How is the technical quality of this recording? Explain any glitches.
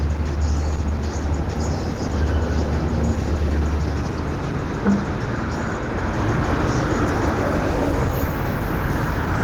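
Quality is limited by plainly audible Opus compression throughout. Tones sound rough and grainy, likely from hybrid-mode Opus at a low bitrate near 16 kbps. On a spectrogram, bands look noise-filled, with nothing above 20.2 kHz.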